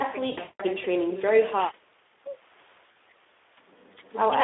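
Across the whole speech clip there's Speex codec damage, clearly audible as hoarse, noisy coding squeezed into roughly 300 Hz to 3.6 kHz, which fits a low bitrate around 11 kbps. From 0.31 to 0.64 s, VoIP packet loss concealed by the speech codec smears the sound into a buzzy tone or coloured noise that fades, then again briefly from 2.91 to 2.96 s.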